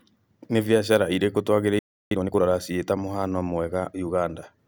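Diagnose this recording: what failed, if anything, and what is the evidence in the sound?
The fault is at the playback stage. A playback stall silences the speech from 1.79 s to 2.11 s, right after "biacara irĩku", a gap of about 320 ms. The dropout in mid-flow likely means the player's buffer ran dry or its output thread was blocked.

A time-compressed catch-up follows, from 2.11 s to 2.43 s. The speech runs at twice normal speed with unchanged pitch, as the player drops and cross-fades short segments to clear the backlog left by the stall.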